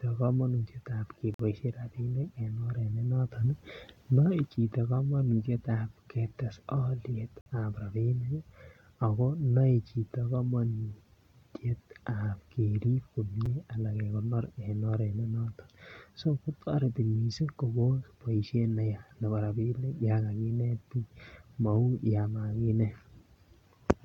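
At 1.34 s the speech drops out for about 50 ms, a gap between stream segments. The timestamps of two adjoining segments don't meet, and the player fills the hole with digital silence, so nothing is lost. The sound just stops and restarts with hard edges. On a waveform this is a flat line between abrupt cuts, and on a spectrogram a clean vertical blank band across all frequencies, noise floor included.

From 3.34 s to 4.56 s the level rises by about 4 dB in a single step and then falls back just as abruptly. It sounds like the speaker suddenly got closer, with the background hiss rising and falling along with the speech. This sudden gain jump is likely a digital gain setting applied from one sample to the next without a ramp. The waveform envelope shows a rectangular step up and back down, and the spectrogram brightens uniformly over that stretch.

The same segment-boundary gap returns at 7.41 to 7.46 s, again about 50 ms of silence, and once more at 13.46 s, this time only about 6 ms long. 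The three gaps fall roughly 6 s apart, which fits the stream being cut into 6-second segments. Each appears as a thin blank column on the spectrogram, and the last one is barely a sliver.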